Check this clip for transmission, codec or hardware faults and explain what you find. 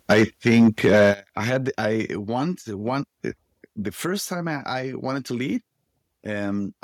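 There are two faults, both hardware-side. From 0.1 to 1.12 s there's microphone overload: the input was likely set too hot, about 8 dB over, so around one in twenty samples gets flattened at the converter limit, giving a harsh crackle. The microphone volume was then stepped down twice, at 0.13 s by about 3 dB and at 1.14 s by about 8 dB. The whole sound, background included, drops abruptly each time, most likely the call software cutting input gain in response to the clipping.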